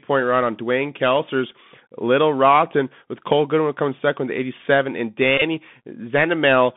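The speech runs through the Bluetooth CVSD headset codec throughout: band limited to roughly 150 Hz–3.5 kHz, with granular hiss, scratchy sibilants and slope-overload distortion, consistent with a 64 kbps link. From 5.38 to 5.42 s, Bluetooth headset packet repeats fill about 34 ms of a 37.5 ms span, with the longest run around 20 ms, producing a brief 267 Hz buzz.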